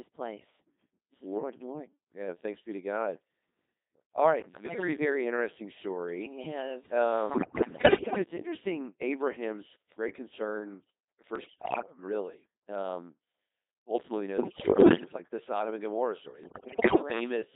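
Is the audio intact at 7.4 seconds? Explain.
No. From 7.30 to 8.24 s, bit errors on digital voice radio corrupt the vocoder frames, so pitch, level and timbre jump into warbling, robotic gibberish, seen as erratic, blocky spectrogram bands. The whole clip also carries heavy Codec 2 vocoder damage, consistent with a 2.4 kbit/s mode. Resynthesised buzzy speech shows smeared harmonics confined to 250 Hz–3.7 kHz.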